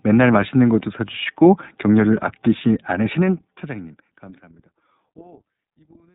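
From the start, the speech carries the iLBC codec throughout: a telephone band cut off below 150 Hz and above 3.7 kHz, with plainly audible roughness and a slightly synthetic grain. Unlike a simple band-limit, the damage sits inside the band. Each frame's excitation is coded on its own, so the texture stays evenly coarse, consistent with 30 ms frames at about 13 kbps. That survives even as the level fades smoothly out from roughly 3 s.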